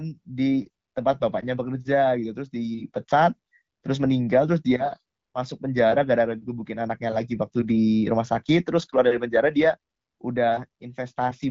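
No technical faults can be heard in this speech, which is carried over an AMR wideband (HD Voice) link at a rate that fits 12.65 kbit/s.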